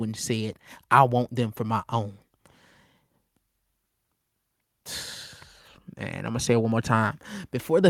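Speech, and from 6.22 s through to the end the whole recording swells steadily louder, the voice and the background noise rising together over roughly 1.7 s rather than the voice alone getting stronger. That joint rise is automatic gain rising: the automatic gain control judged the incoming signal too quiet and gradually raised its gain, lifting everything in the input by the same amount, so the noise floor climbs right along with the speech.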